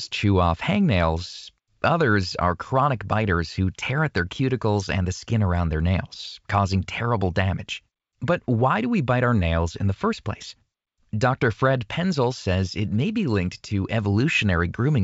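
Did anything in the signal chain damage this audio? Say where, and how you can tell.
No, nothing here has damaged it; the speech simply carries the band-limited character of G.722 wideband telephone coding, with content reaching up to around 7 kHz and a top end that fits the codec's full 64 kbit/s mode.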